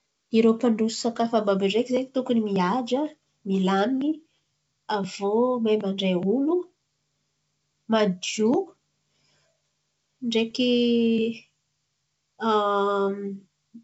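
Bit errors on an ADPCM link, at a low rate of a small fraction of a percent, hit this speech recording at 1.14 s and again from 10.51 to 10.57 s. Each flipped bit throws off the decoder's step size and prediction, causing brief pops and rough, level-jumping bursts, on otherwise clear wideband G.722 sound.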